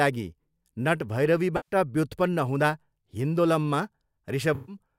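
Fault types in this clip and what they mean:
AAC frame loss with concealment: Blocks of coded audio went missing, and the decoder patched each gap by reusing the last good spectrum with altered phase and energy. This speech clip has two such patches, at 1.56–1.75 s and 4.55–4.76 s (about 107 ms and 128 ms, consistent with five and six AAC frames). Each sounds like a smeared, noisy or phasey patch. On a spectrogram they appear as blurred, stretched bands. The waveform loses its crisp detail for those stretches.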